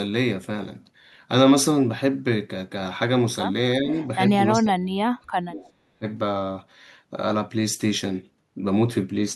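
Speech with its level ducking under what is likely speech suppressed in double talk: a dip of about 10 dB at 3.8 s, a deep gap of about 40 dB from 4.57 to 5.72 s, and about 25 dB at 5.93 s, shown as hollowed waveform and faded spectrogram bands. A faint echo leak, about 30 dB down and 371 ms late, is heard at 4.04 s and 5.61 s, appearing as weak, delayed copies of earlier spectral patterns.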